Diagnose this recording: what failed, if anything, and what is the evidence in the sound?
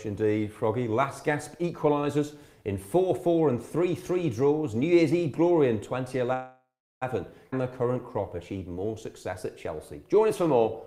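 A call audio freeze at the network and jitter-buffer stage runs from 6.33 to 7.04 s. The last sound is held over as a fading buzz that drops to silence for about 0.36 s, and then the audio resumes exactly where it left off. Nothing is missing, so this is not a dropout: about 0.68 s has been inserted. The likely cause is packets delayed in transit, which let the buffer run dry while the receiver concealed the gap.

A skip ahead follows at 7.52 to 7.54 s, at the network or jitter-buffer stage. Playback jumps forward with almost no gap, and roughly a fifth of a second of audio is lost, with the two sides joined nearly directly. Unlike the freeze, nothing is stretched and only about 7 ms is filled. A stretch of audio was dropped while later audio was already waiting, which pulls the delay back down by about the same amount.

A jitter buffer slow-down covers 7.55 to 10.59 s. The sound plays at about 94% speed while the pitch stays the same, with drawn-out sounds. 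The receiver is repeating single pitch periods and bits of pauses to add about 200 ms of reserve. Because the pitch holds steady, this is not a clock or sample-rate mismatch, which would shift the pitch along with the speed.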